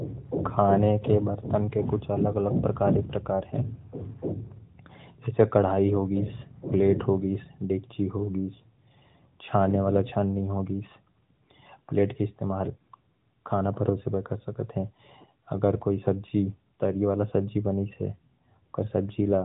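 Nothing goes wrong anywhere in this speech recording, which simply comes through a mobile-phone channel as expected, topping out a little under 4 kHz.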